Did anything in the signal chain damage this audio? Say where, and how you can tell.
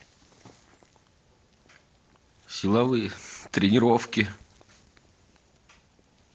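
No, nothing in this speech stood out on listening as damage from any stage of the chain.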